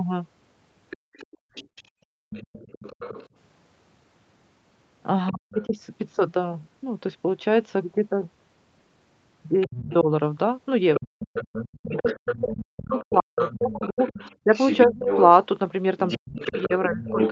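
From 0.9 to 3.27 s a faint second voice sits about 20 dB under the speech, likely the other side's voice leaking through past the echo canceller. Unlike double-talk suppression, it adds sound rather than removing it. Within that span, 0.97 to 2.3 s, the background is gated by the echo canceller: the room tone drops by about 34 dB for roughly 0.7 s in total.

The leak returns at 5.29 to 5.65 s, about 30 dB down. From 5.3 to 5.77 s the talker's own speech dips, by roughly 40 dB at its deepest, for around 0.4 s. This is likely speech suppressed in double talk, because the canceller ducked the near voice together with the echo.

From 9.61 to 17.3 s the leak is strongest, only about 10 dB below the speech. Across 9.67 to 17.2 s the talker's speech repeatedly cuts and dips, again by up to roughly 40 dB, for about 3 s in total.

The Opus call path tops out at 8 kHz.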